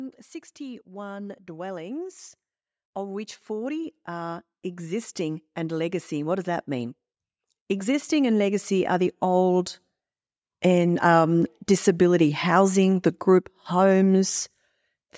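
From 2.94 to 6.97 s, then 7.67 to 9.76 s, automatic gain rising lifts the level by about 8 dB, then about 4 dB. Voice and background swell together slowly, unlike a speaker moving closer.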